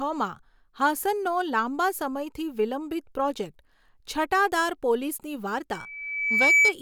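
From 5.73 to 6.74 s, loudspeaker feedback squeal. The microphone picks up its own loudspeaker. A 2.3 kHz tone swells to about 10 dB above the speech.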